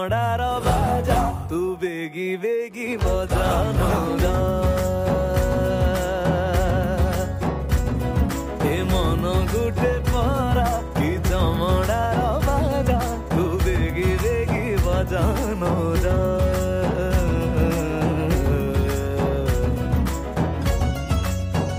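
No technical faults can be heard anywhere in this audio. Nothing along the way breaks up, cuts out or shifts in a way that would point to a problem in the chain.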